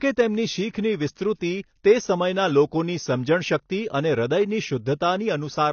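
From start to finish the speech sounds dull and smeared, with plainly audible fizzy, warbling artefacts, likely from AAC compression at a low bitrate, about what 24 kbps AAC-LC would give. A spectrogram would show a flat ceiling with nothing above 6.6 kHz.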